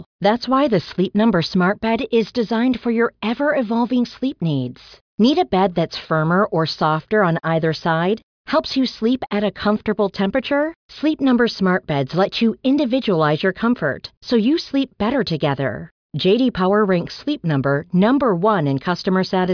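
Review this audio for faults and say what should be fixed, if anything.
No faults; nothing needs fixing.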